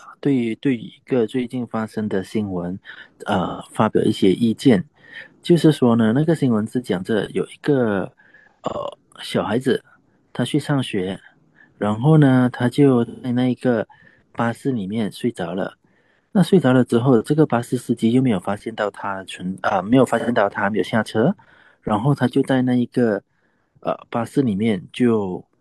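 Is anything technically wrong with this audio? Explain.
Yes. The speech has AAC frame loss with concealment at 3.47–3.63 s, 8.08–8.79 s, 13.06–13.30 s and 20.19–20.29 s. Each time, the decoder replaces missing blocks by reusing the last good spectrum with altered phase or interpolated energy, so the gaps sound smeared, noisy or phasey rather than silent. The 8.08 s event is scattered, totalling about 341 ms over 683 ms, and its longest run is roughly 100 ms. The other gaps are about 128, 171 and 85 ms.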